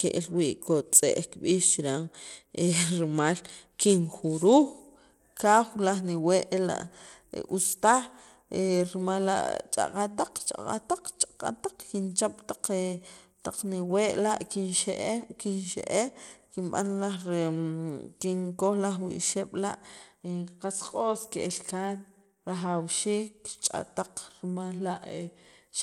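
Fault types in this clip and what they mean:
Bluetooth SBC compression: The speech throughout carries plainly audible coding damage, a gritty, grainy noise riding on the sound with treble that flickers in and out rather than fading smoothly, and nothing at all above about 17.2 kHz. This coarse, unmasked grit points to the sub-band codec likely used on a Bluetooth link, at a rate that fits roughly 96 kbps, and sets it apart from perceptual codecs, whose artefacts sound swirly and watery instead.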